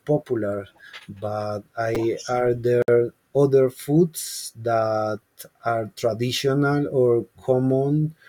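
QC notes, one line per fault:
1.95 s and 4.44 s: repeated buffer. A tiny slice of sound plays three times with hard joins, heard as a brief click or buzz. New audio arrived late, and the repeat fits a 5 ms buffer. About 10 ms of real sound is lost. The second comes just before "that are traditional or".
2.82 to 2.88 s: gap at a join of encoded pieces. A 59 ms gap cuts into continuous sound, with smeared edges. Separately encoded pieces were joined untrimmed, leaving encoder delay and padding in place. The sound then resumes where it stopped.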